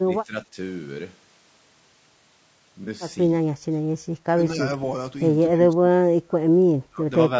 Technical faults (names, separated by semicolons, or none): low-delay AAC compression; speech suppressed in double talk; AAC frame loss with concealment